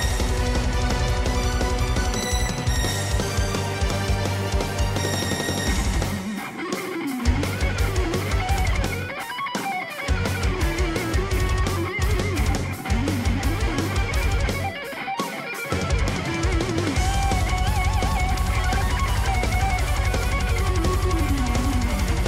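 No technical faults are audible.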